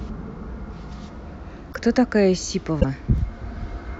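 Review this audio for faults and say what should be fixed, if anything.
At 1.72 to 1.75 s and 2.80 to 2.85 s, the speech jumps ahead. The likely cause is a broken MP3 bit reservoir. Frames of about 24 ms seem to have been dropped, so the next frame borrows bytes from the wrong data. Keep MP3 streams intact when cutting, or cut only on decoded audio.

At 3.18 s there is a single sharp tick. This is a bit error spike: one bit in a single sample is flipped in memory or on a digital link, jumping by a power of two and returning at once. Protect storage and transfer paths with checksums or error correction.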